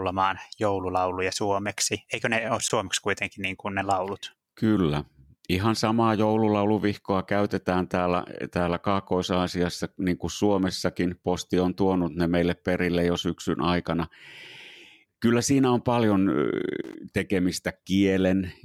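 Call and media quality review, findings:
Block of digital silence at 2.68 s: 17 ms dropout. Output buffer likely not filled in time, so zeros were played out.

Loose connector crackle, 16.84–16.95 s: irregular burst of scratching, about 0.11 s. Worn or dirty contact intermittently breaking the signal path, chopping the audio.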